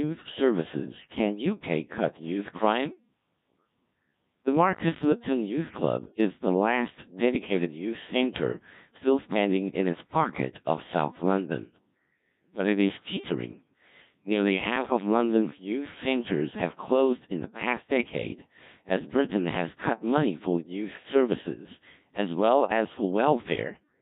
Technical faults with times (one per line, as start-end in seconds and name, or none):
0.00-24.02 Codec 2 vocoder